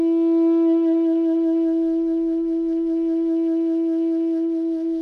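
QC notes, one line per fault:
No faults found in this music clip.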